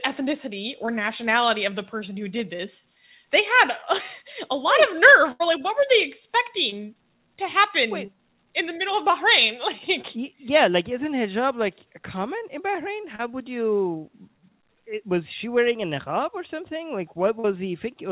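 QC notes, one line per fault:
0.86, 6.70, 8.06, 10.02, 13.15 and 17.40 s: short concealed packet loss. About 20 ms of audio failed to arrive at the first four points and about 40 ms at the last two. Each time the receiver patched the hole by extending the preceding sound, then crossfaded back. The result is a brief smear or wobble, and at 13.15 s a few extra milliseconds were slipped in. On a spectrogram the band-limited trace, empty above 4 kHz as G.711 A-law leaves it, shows short blurred or frozen patches. The waveform shows copied cycles.
5.32 to 5.42 s: burst of packet loss. About 80 ms went missing in a row, too much for a seamless patch. The receiver kept the last sound going and lowered it as the gap lengthened, so a held buzz or fading hiss stands where the real audio should be. Playback then jumps ahead, with that stretch gone. On a spectrogram, frozen horizontal lines fade out before an abrupt restart. 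In the waveform, repeated cycles shrink in amplitude and end at a visible step.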